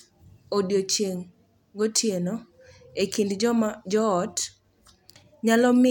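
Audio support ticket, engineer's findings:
Reviewed the speech recording by ear: nothing stood out as a fault.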